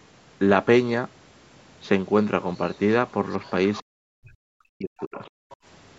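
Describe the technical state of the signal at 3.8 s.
Other side's voice leaking through runs from 3.74 to 3.82 s. A faint second voice sits about 20 dB under the speech. It sounds brief. The likely cause is loudspeaker echo that the echo canceller left in the microphone signal.

Speech suppressed in double talk follows from 3.82 to 5.21 s. The talker's level dips sharply, by up to about 40 dB. This likely happens because the canceller cannot separate talker from echo, so it turns both down.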